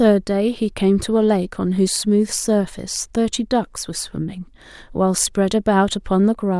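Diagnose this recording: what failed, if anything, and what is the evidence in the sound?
Nothing failed in this recording, and the sound gives no evidence of any stage going wrong.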